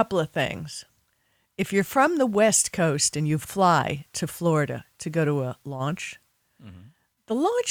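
Listening to the speech recording, nothing stood out as a technical fault at any point.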